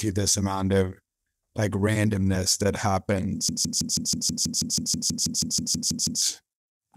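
At 3.49 s the speech locks into a broken-record loop: a 161 ms fragment repeats exactly, back to back, 17 times until 6.22 s. The likely cause is a stalled player or stream resending its last buffered piece, so the intended audio is lost.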